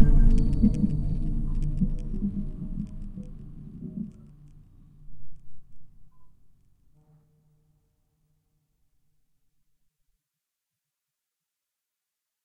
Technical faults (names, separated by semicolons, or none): none